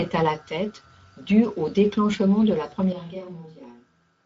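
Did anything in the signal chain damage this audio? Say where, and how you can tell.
Yes. Throughout the clip the speech has a grainy, hoarse texture, and nothing reaches above about 7.7 kHz. That points to the codec stage. This is Speex codec damage: the CELP coder models each short frame with a filter plus a coded excitation, and with too few bits for that excitation the result turns noisy and rough. The rate sounds like roughly 16.8 kbps wideband, and the loss is plainly audible.

At 2.93 s, right after "au déclenchement de la", the sound turns suddenly roomy and hollow and stays that way to the end. The level drops by about 10 dB, and room noise now sits around 35 dB below the speech. This is likely a switch to a distant microphone at the capture stage: the close microphone's feed dropped out, and a farther one picked up more room and less direct sound.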